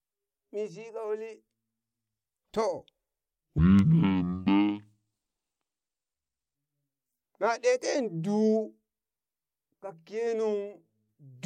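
From 3.58 to 6.55 s the speech drops to half speed and an octave low: stereo read as mono, with left and right samples taken in turn as one channel. Unlike a plain sample-rate mismatch, a fainter mirrored copy also sounds in the upper spectrum.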